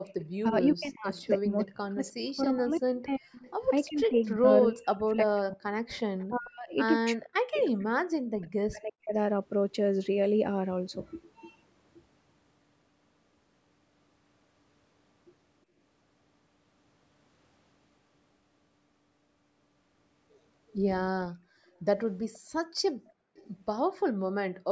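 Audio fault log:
0.0–0.14 s, background gated by the echo canceller: the canceller clamped the microphone while the loudspeaker played, so the room sound briefly drops out by about 37 dB.
0.23–4.32 s, 5.9–6.26 s and 7.79–7.85 s, echo leak: the far side's canceller likely let loudspeaker sound through, so a faint copy returns 340–349 ms late, about 25–35 dB below.
0.42–9.14 s, speech suppressed in double talk: with both sides talking, the canceller likely mistook speech for echo and turned it down, so the voice dips up to about 40 dB, repeatedly, for around 5 seconds.
21.36–24.68 s, background gated by the echo canceller: the canceller pulled the microphone down during loudspeaker playback, so room sound dips by about 34 dB in stretches totalling about 1.5 seconds.
22.34–22.39 s and 23.35–23.5 s, echo leak: loudspeaker sound likely escaped the canceller again, returning as short scraps delayed by 370 and 372 ms, about 30 dB down.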